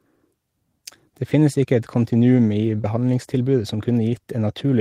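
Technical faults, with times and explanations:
2.81–2.85 s, short concealed packet loss: About 20 ms of the speech never reached the decoder in time. The receiver covered the gap by extending the sound just before it, then crossfaded back into the real signal. The patch fills the hole, so there is no silence. The join still shows as a brief smear in the speech. The stretch is short, which fits a single late or lost packet.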